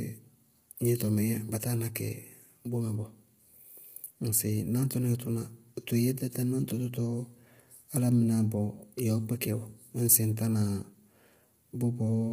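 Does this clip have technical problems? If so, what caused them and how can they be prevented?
Yes. Throughout the speech, low-delay AAC compression likely ran with too few bits, leaving the voice rough and grainy with nothing above 15.7 kHz, consistent with AAC-ELD near 24 kbps. A higher bitrate, or a standard-delay codec where latency isn't critical, prevents this.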